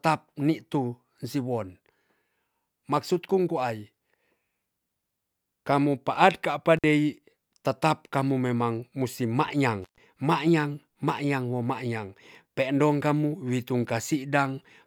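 At 6.77 s and again from 9.82 to 9.98 s, intermittent contact opens the speech line for about 52 ms and then 133 ms. Unlike a clean digital dropout, each cut is bracketed by crackle and leaves faint hiss, as a loose connection briefly breaks.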